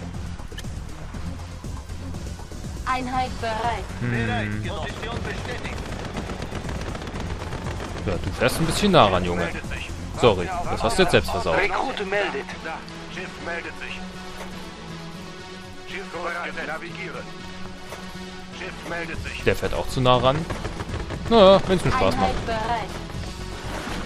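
No technical faults can be heard anywhere in the signal.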